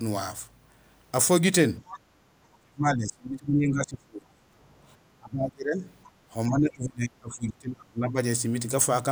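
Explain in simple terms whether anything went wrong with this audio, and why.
From 1.9 to 1.99 s a faint second voice slips in, likely the other side's voice leaking through from a loudspeaker the echo canceller didn't fully remove.

Right after, from 2.0 to 2.2 s, the background is gated by the echo canceller: the room sound briefly dips while the loudspeaker plays, then returns.

The talker's own speech fades and breaks up at 2.48–4.46 s, 5.18–5.85 s and 6.48–8.18 s, likely speech suppressed in double talk, with the canceller muting both sides.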